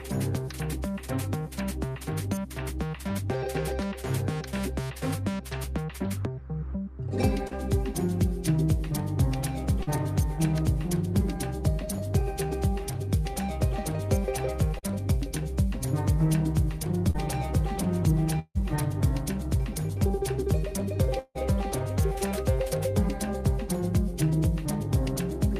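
Four short concealed packet losses come first, at 7.47, 9.83, 14.79 and 17.11 s. Each time about 40 ms of the stream failed to reach the decoder in time, and the receiver bridged the gap by extending the preceding sound for roughly 35 to 40 ms before crossfading back into the real signal. Each repair is heard as a quick smear or wobble.

At 18.39 s and again at 21.19 s comes what is likely a long network dropout, with about 0.16 s of audio absent each time. The concealment stretches the last sound into a fading buzz or hiss for almost the whole gap, then gives way to a short silence, about 40 ms at the first and 20 ms at the second, before playback resumes past the missing portion.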